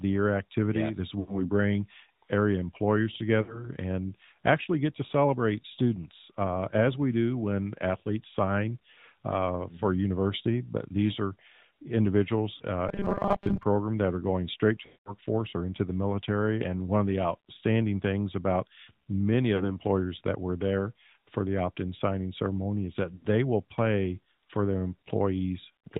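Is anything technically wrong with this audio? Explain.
Yes. The speech has passed through the AMR narrowband mobile codec, suffers several runs of lost AMR speech frames, and has a stretch of robotic sound.

Throughout, the AMR-NB coding at 10.2 kbps is plainly audible. Sampling at 8 kHz means nothing survives above 4 kHz, so the speech sounds boxed-in and telephone-like, with a buzzy, synthetic edge from the pulse-driven vocal tract model. A spectrogram shows a hard ceiling at 4 kHz with empty space above it for the whole clip.

Lost AMR speech frames occur at 1.20 to 1.50 s, 3.42 to 3.69 s, 12.56 to 12.62 s, 14.86 to 15.14 s, 19.56 to 19.79 s and 23.16 to 23.26 s. The longest gap, 200 ms, falls between "are going straight to" and "or into the military". Others fall after "outstanding things about many" and after "in signing ceremony is", and the rest lose 40 to 80 ms each. In each gap the decoder stretches the last good frame with falling gain, so the sound smears, warbles and sags before recovering roughly. 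The waveform shows an envelope decaying toward silence. The spectrogram shows frozen, blurred harmonics.

From 12.88 to 13.63 s the sound turns into a rigid metallic buzz at 200 Hz that only loosely tracks the speech. This is likely caused by audio arriving too seldom, with a short block of about 5 ms repeated while roughly half of the real audio is skipped. The spectrogram shows evenly spaced horizontal bands at multiples of 200 Hz, and the waveform shows an identical short cycle repeating.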